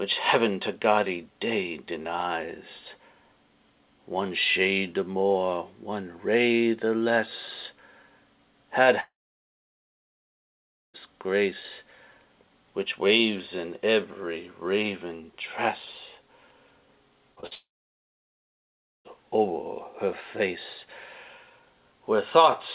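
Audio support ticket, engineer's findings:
Long network dropout, 9.0 to 10.96 s: sound stops, a short fading buzz, then about 1.8 s of near-silence. Returns with that stretch gone. Likely a network outage; jitter buffer starved and concealment gave up. Second one at 17.55 to 19.07 s, same shape, about 1.4 s dead air. Both lose audio outright, not delayed.

Short concealed packet loss, three quick hits at 17.36 to 17.39 s, 17.41 to 17.45 s and 17.47 to 17.53 s: brief smears and wobbles, each tens of milliseconds. Decoder missed packets and patched the gaps by extending the previous sound, then crossfaded back. Clustered right before the 17.55 s dropout, so the link was already falling apart. Band-limited G.711 path, nothing above 4 kHz.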